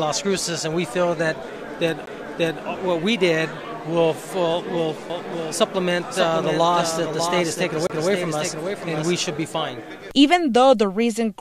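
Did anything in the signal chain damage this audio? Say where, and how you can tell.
Yes. A CD skip happens at 2.06 s and again from 7.87 to 7.90 s. Each is a brief mute, roughly 15 ms and then roughly 30 ms, followed by a sudden jump. This is a playback fault. The laser lost its track and resumed on a different turn of the disc's spiral.

A doubled audio track runs from 5.10 to 9.44 s. A second full-band copy trails the original by about 0.7 s, about 5 dB quieter, with no decay or room colour. It starts and stops abruptly. The likely cause is a second, slower capture path or an edit holding two out-of-step copies.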